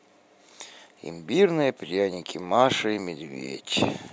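A speech recording with no audible technical faults.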